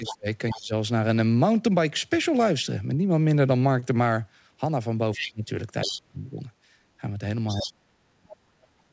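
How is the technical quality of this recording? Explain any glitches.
Several call glitches interrupt the speech, concentrated at the start and in the second half, heard over a bandwidth that stops at 8 kHz, which fits a wideband call codec such as G.722.

The speech is suppressed in double talk from 0.0 to 0.73 s, 5.17 to 5.5 s, 5.85 to 6.36 s, and from 7.55 s to the end. The voice sinks by roughly 20 dB in the first two of these and by 35 to 40 dB in the last two. The likely cause is an echo canceller that, with both parties talking, could not tell near speech from loudspeaker echo and attenuated everything.

The other side's voice leaks through at 0.06 to 0.15 s, 5.15 to 5.27 s, 5.81 to 5.98 s, and 7.48 to 7.72 s. It is a second voice, about 10 to 15 dB under the main talker. This is likely loudspeaker sound that the echo canceller left in the microphone signal.

A short stall from a late packet occurs at 3.80 to 3.85 s. 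The sound is held for an extra 24 ms with a slight smear, and nothing is lost afterward. The jitter buffer emptied, so the receiver stretched the last audio until the delayed packet arrived.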